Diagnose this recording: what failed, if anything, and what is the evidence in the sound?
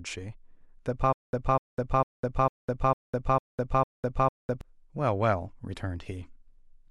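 The playback path most likely stalled: the player kept retrying, and on each attempt it replayed the last fragment it held before the buffer ran dry. The result is a stutter with silent gaps from 1.13 s to 4.61 s. A 248 ms burst of speech repeats seven times, each followed by about 203 ms of digital silence, giving a steady 451 ms cycle. The speech that should have filled that stretch never arrives.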